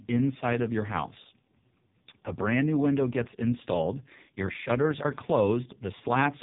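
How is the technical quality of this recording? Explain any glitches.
Pretty rough, honestly. The whole clip runs through the AMR narrowband mobile codec, heavily squeezed, so nothing above about 3.8 kHz survives and the speech sounds buzzy and synthetic, consistent with the lowest 4.75 kbps mode.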